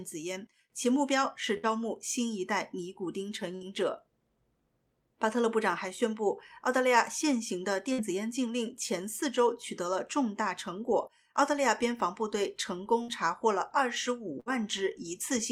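A burst of packet loss hits five times: at 1.57–1.66 s, 3.55–3.64 s, 7.93–8.01 s, 13.02–13.11 s and 14.40–14.49 s. Each time about 60 ms of audio never arrives. The receiver bridges the hole by stretching the last sound for roughly 53–60 ms while fading it, giving a brief held buzz or dimming hiss before the sound jumps ahead. Unlike a plain dropout, the gap is filled rather than silent.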